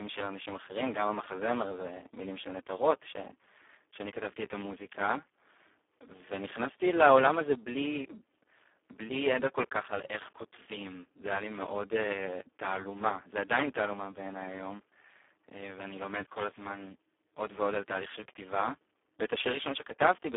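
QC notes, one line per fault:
Throughout: Speex codec. The speech sounds hoarse, noisy and buzzy, edging toward robotic, squeezed into a 300 Hz to 3.4 kHz telephone band with nothing above 3.7 kHz. The starved, vocoder-like excitation points to a very low setting near 4 kbps.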